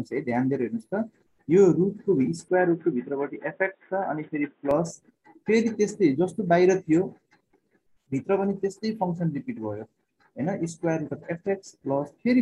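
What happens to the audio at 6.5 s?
Nothing goes wrong at 6.5 s; the audio plays through that moment intact, with no dropout, click, glitch or other fault.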